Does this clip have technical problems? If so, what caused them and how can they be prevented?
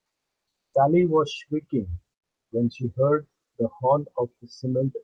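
Yes. Comfort noise replaces the background from 0.00 to 0.73 s. The opening is a steady, featureless hiss about 19 dB quieter, likely from Opus discontinuous transmission. On a spectrogram it shows as a flat, uniform haze with no texture. Turning off DTX, or lowering the voice detector's threshold, keeps the real background flowing.

The onset is clipped by the voice detector from 0.64 to 0.73 s. About 90 ms of the start is missing, likely because the detector was slow to react, so the speech begins abruptly at 0.73 s. The waveform jumps straight in with no rising edge. Giving the detector lookahead, or disabling DTX, preserves the soft beginning.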